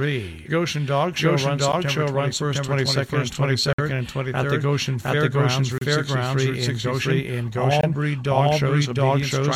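From the start, every sound arrives twice. A doubled audio track runs through the whole clip. A second full-band copy trails the original by roughly 0.7 s, at about the same level. It carries no decay and no room colour, so it reads as a plain repeat, not an echo. The likely cause is a second, slower capture path mixed in alongside the first. Two copies then overlap out of step.

At 1.72 s comes the first gap between stream segments. This is a short, hard-edged drop to silence. More follow, roughly every 2 s: 3.73 to 3.79 s, 5.78 to 5.82 s, and 7.81 to 7.83 s. They last about 56 ms, 34 ms and 24 ms. The time stamps of adjacent segments do not meet, so the player pads the space with silence. No audio is lost. The sound simply stops and resumes abruptly.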